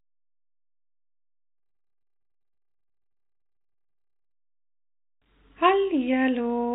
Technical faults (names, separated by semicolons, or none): jitter buffer slow-down